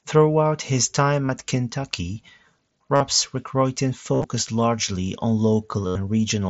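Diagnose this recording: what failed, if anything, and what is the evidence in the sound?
Concealed Bluetooth headset packet loss on the wireless link at 1.26–1.29 after "his time", 2.95–3.01, 4.14–4.24 before "largely on", and 5.87–5.95 after "largely on". The receiver loops the last stretch of waveform into short buzzy held tones.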